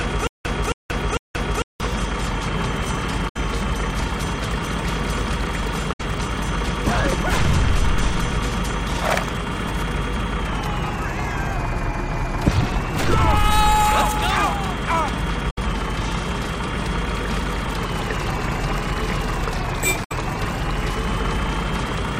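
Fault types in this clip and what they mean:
stutter with silent gaps: From the start to 1.8 s, a 0.27 s burst repeats every 0.45 s with 0.18 s of silence between, three times, already under way when the clip begins. The likely cause is a stalled player replaying its last fragment, then running empty.
damaged data in a compressed stream: Brief disruptions, each about 0.09 s long, occur at 3.28, 5.92, 15.49 and 20.03 s. Corrupted compressed data there makes the decoder misread frames and lose sync until it finds the next valid frame header.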